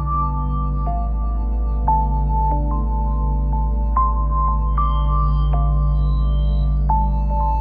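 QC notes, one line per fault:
No faults were heard in this music clip.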